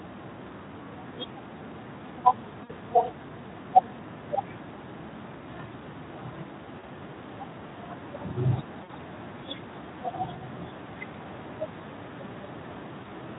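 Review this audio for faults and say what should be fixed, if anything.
VoIP packet loss concealed by the speech codec appears at 2.63 to 2.72 s, 6.79 to 6.86 s, 8.83 to 8.93 s and 13.03 to 13.11 s. Each gap lasts about 20 to 60 ms, which fits one to three lost 20 ms frames. During each gap the decoder repeats its last pitch and filter at falling gain, so the speech smears into a fading buzzy tone or coloured noise and recovers weakly afterwards. A plain dropout would instead cut to silence or click. Adding forward error correction and a deeper jitter buffer, or fixing the network loss, would prevent it. The Speex coding around these gaps, at 15 kbps, adds only light coding damage.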